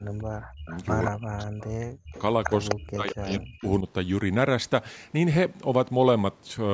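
Speech that ducks deeply, by around 40 dB, at 0.0–0.7 s, 1.08–2.15 s and 2.75–3.86 s is likely speech suppressed in double talk. The sound dips and thins in pieces rather than dropping out cleanly as a network gap would. At 0.68–1.11 s, 2.15–2.75 s and briefly at 3.07 s, a weaker copy trails 197 ms behind, loudest around 2.2–2.7 s. This is likely an echo leak from a loudspeaker end, and its fixed, distinct repeat sets it apart from room reverberation, which smears rather than repeats.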